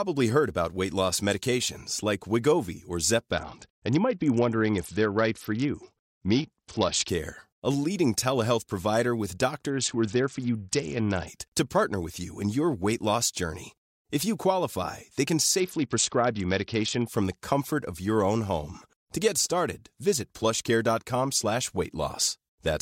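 From 3.32 to 7.09 s (before "a leading telehealth provider"), 9.70 to 11.28 s (after "leading telehealth provider with"), and 15.60 to 17.07 s (after "you qualify they can"), the speech turns dull and gritty: a Bluetooth SBC bit pool drop, consistent with a fall from 31 to 7 near 61 kbps, which starves the treble sub-bands.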